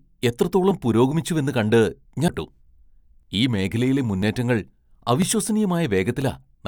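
From 0.71 s to 6.22 s, small regular ticks arrive about once a second, each costing roughly a millisecond of speech. These are periodic USB or driver dropouts. A background task stalls the audio path at a fixed interval, and the missing samples are skipped rather than filled.

At 2.28 s there is a brief mute of about 10 ms with a tick, and then the speech resumes from a different point. This is a CD skip. The laser jumped to another turn of the disc's spiral, so the player muted briefly and carried on from the new position.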